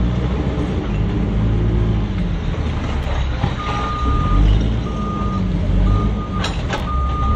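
Chunks out of order occur twice, at 3.03–3.05 s and 6.78–6.80 s: a 10 ms chunk arrived one slot late and played after its successor. Nothing is lost, but the swapped pair creates three hard joins, heard as a brief jumble.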